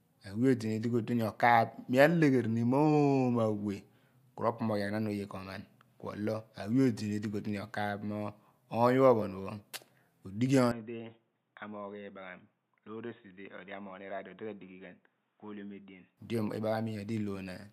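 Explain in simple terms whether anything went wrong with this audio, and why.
At 10.71 seconds the speech suddenly turns dull, boxy and quieter, with a faint new hiss. Nothing above 3.8 kHz gets through. There is no gap at the change. At 16.17 seconds it clears up again. The likely cause is the input switched to a poorer device.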